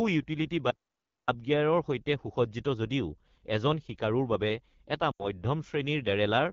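AMR wideband (HD Voice) codec coding runs through the whole clip, and the speech sounds rough and raspy. That fits one of the codec's lowest rates, around 8.85 kbit/s, where the pulse-driven vocal tract model can't capture enough detail and the band above 6.4 kHz is only shaped noise.

An audio dropout to silence runs from 0.71 to 1.28 s, about 0.57 s long. The speech cuts off abruptly into silence with no room tone, then resumes mid-flow. The likely cause is a lost input, with the recorder still writing silence.

Lost AMR speech frames occur from 5.11 to 5.27 s. The sound drops to near silence within two frames, then comes back weak or rough for a moment. The decoder is reusing stale pitch and vocal tract settings with falling gain, which fits about 80 ms of missing frames.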